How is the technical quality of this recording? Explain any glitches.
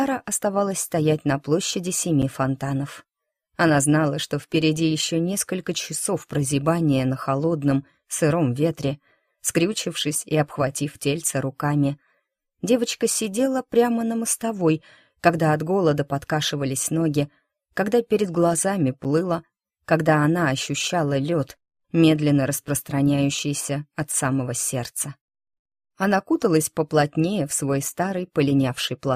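The recording has two brief dropouts, each a block of digital silence about 8 ms long, at 2.22 s and 19.04 s. A run of samples was replaced by zeros, so the sound cuts abruptly to nothing and back without any fade. That hard edge on both sides is heard as a sharp tick or pop rather than a noticeable hole.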